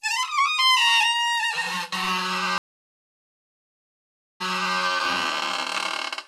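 The connection dropped at 2.58 s and the player had to reconnect and start a fresh decoder partway through the stream, a stream reconnect. The audio goes silent for about 1.82 s. When it returns, it picks up roughly 0.37 s earlier than where it cut off, so a short stretch repeats. That fits a server resending a burst of recent data on reconnection. The whole disruption runs from 2.58 s to 4.77 s.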